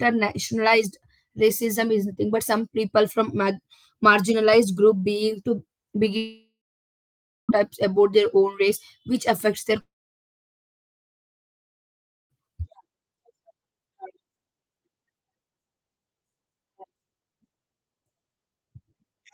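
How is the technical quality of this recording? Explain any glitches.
The recording is disrupted by network faults: one brief glitch and two long gaps in the sound.

At 5.99–6.03 s, just after "being to", a quick smear marks short concealed packet loss. About 20 ms went missing and was patched by stretching the preceding sound.

Two long network dropouts follow. From 6.17 to 7.51 s the sound fades into about a second of silence, returning at "about their own race." From 9.81 to 12.32 s, after "race which affects their", it falls silent for about 2.4 s. Both are likely undelivered audio that the receiver briefly extended before giving up.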